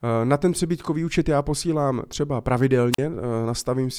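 At 2.92 s, right after "účet já posílám třeba", the speech suffers a wireless microphone squelch dropout lasting until 2.98 s. The radio link from an analogue FM microphone weakened. The receiver's squelch then shut its output. A short burst of hiss or static comes first. A hole of near silence follows, about 41 ms long. Then the speech comes back.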